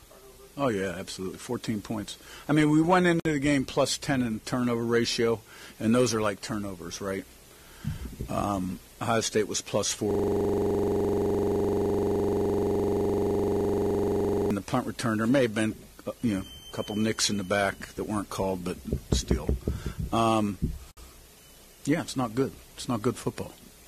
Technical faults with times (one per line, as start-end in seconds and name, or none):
3.20-3.25 gap at a join of encoded pieces
10.11-14.51 system hang loop
20.91-20.97 gap at a join of encoded pieces